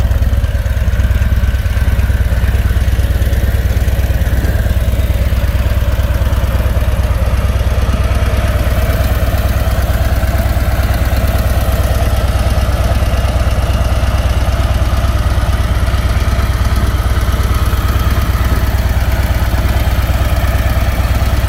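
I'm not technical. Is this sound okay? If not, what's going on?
Yes, nothing in this recording points to a technical problem; it sounds the way it should all the way through.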